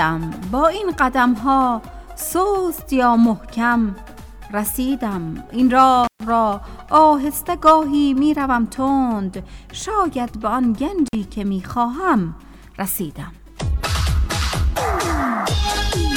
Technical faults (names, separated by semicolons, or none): intermittent contact